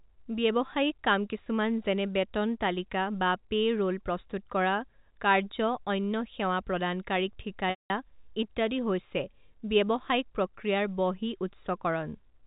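Packet loss with pitch repetition occurs at 1.44–1.46 s, a brief 20 ms buzzy hold, and at 7.7–7.9 s, where a 200 ms gap shows repeated pitch periods as flat, striped harmonics fading to silence.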